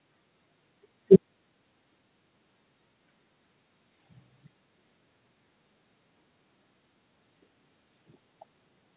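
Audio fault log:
No faults detected in this speech clip; the call path's narrowband sound, with nothing above 4 kHz, fits a G.711 mu-law link at 64 kbps.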